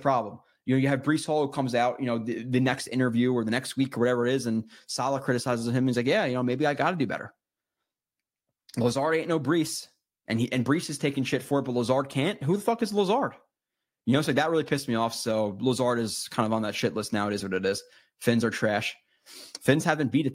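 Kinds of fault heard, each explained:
No faults turn up anywhere in this one, so there's nothing to list here.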